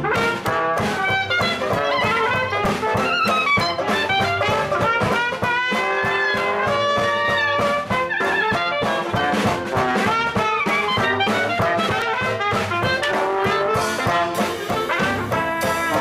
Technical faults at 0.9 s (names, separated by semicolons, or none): none